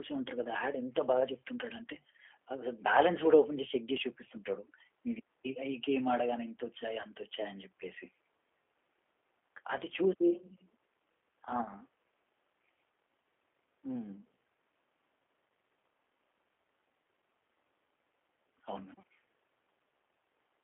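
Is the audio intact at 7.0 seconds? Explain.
No. VoIP packet loss concealed by the speech codec hits from 7.02 to 7.08 s. About 20 ms of audio is missing, which fits two lost 10 ms frames. The decoder fills the gap by extrapolating its last pitch and vocal-tract filter at falling gain, so the sound smears into a brief buzzy tone or coloured noise that fades, and stays weakened for a moment after packets resume.

The G.729 codec also runs through this moment. At 8 kbit/s it rebuilds the sound from a filter, a pitch predictor and sparse pulses, within a 300 to 3400 Hz line band, giving a plainly audible rough, synthetic texture.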